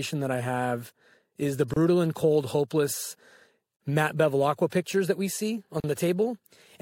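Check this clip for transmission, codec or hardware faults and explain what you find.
Three brief dropouts interrupt the speech, all of one kind: a gap at a join of encoded pieces. At 1.74–1.76 s (29 ms), 3.76–3.80 s (38 ms) and 5.80–5.84 s (38 ms), repeating every 2.0 s, separately encoded segments were joined with encoder delay and end padding left in. The sound cuts to silence with smeared edges, then resumes where it stopped.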